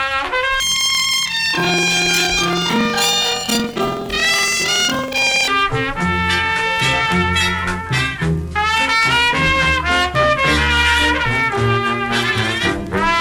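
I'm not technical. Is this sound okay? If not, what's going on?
No. From 0.60 to 5.5 s the sound jumps an octave high with a rapid flutter about 21 times a second. This is planar audio read as interleaved: each roughly 46 ms block of left-then-right samples (which fits a 2048-sample block) plays twice, sped up.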